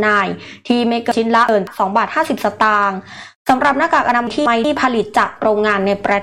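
At 1.12 to 1.67 s and again at 4.27 to 4.64 s, chunks play out of order. A block of roughly 186 ms arrives late and plays after material that should follow it, two blocks late the first time and one the second. Each spot sounds briefly jumbled, with three hard joins. Unlike a dropout or a repeat, nothing goes missing and nothing plays twice. The same sound is just in the wrong sequence.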